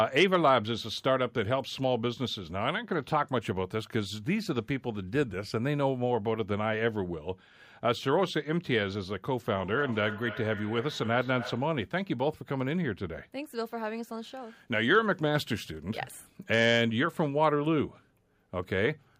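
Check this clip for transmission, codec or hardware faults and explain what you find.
One fault stands out: feedback echo between two devices, from 9.51 to 11.82 s. The speech comes back at a steady delay of roughly 300 ms. At its loudest the echo sits about 13 dB below the direct speech. A second device in the same room is playing the call aloud, and this microphone picks that playback up again. This end's echo canceller only removes its own device's output, so the returned sound passes straight through.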